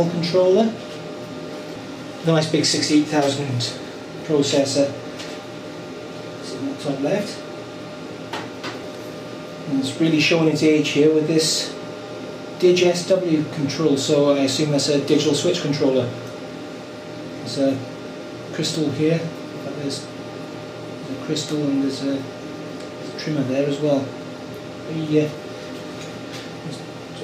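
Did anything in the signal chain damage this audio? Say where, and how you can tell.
No, nothing damaged this audio.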